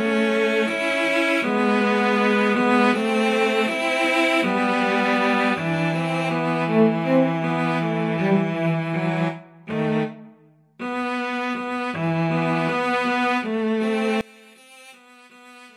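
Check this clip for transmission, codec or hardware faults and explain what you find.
One fault is present, near the end of the clip. From 14.21 s to the end at 15.76 s, the sound drops by about 26 dB and turns faint. Nearly all of the sound, background included, disappears. What remains is a faint residue. The likely cause is one channel inverted. When one stereo channel has reversed polarity and the pair is summed to mono, the material common to both channels cancels. Only the small difference between the channels survives.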